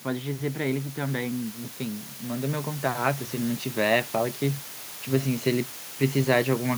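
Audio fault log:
throughout: low bit depth with dither. A steady, even hiss sits roughly 15 dB below the speech, which fits a 6-bit signal. It shows as a flat broadband haze across the spectrogram.
0.05–3.26 s: automatic gain rising. The gain control lifts the level by about 7 dB, so speech and hiss swell together. The waveform envelope widens gradually.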